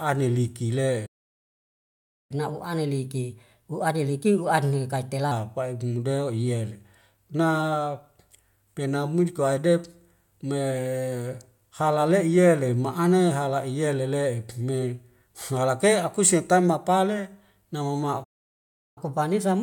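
Speech, interrupted twice by a playback stall. The first runs from 1.06 to 2.31 s and silences the sound for about 1.2 s. The second runs from 18.24 to 18.98 s and lasts about 0.7 s. Each time the speech stops mid-flow and then resumes. The likely cause is that the player ran short of data or its thread was blocked. After each stall comes a catch-up at higher speed. The player resamples its backlog to win back the lost time. From 2.31 to 5.31 s the speech runs at 1.15 times normal speed, with pitch raised by roughly two semitones. It then settles back to normal. From 18.98 s to the end, the speed is 1.1 times normal and the pitch sits roughly a semitone and a half high. Both the tempo and the pitch rise together, giving a brief hurried, slightly chipmunk quality.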